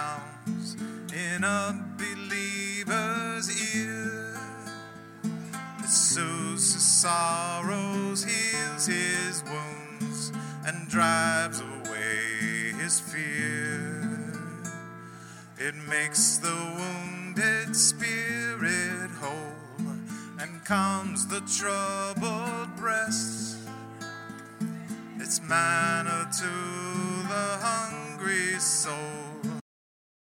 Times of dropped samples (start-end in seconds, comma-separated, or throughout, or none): 3.49